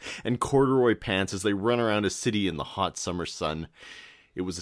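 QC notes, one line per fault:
No faults found in this speech clip.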